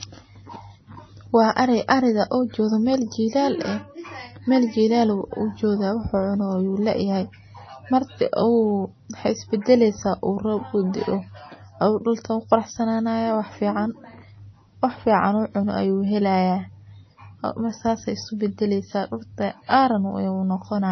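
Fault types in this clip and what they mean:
MP3 compression: The speech sounds dull and watery throughout, with nothing above 6.1 kHz and plainly audible swirling as weak frequency lines drop in and out from frame to frame. The likely cause is heavy MP3 encoding, with a treble cut-off that fits a bitrate around 24 kbps.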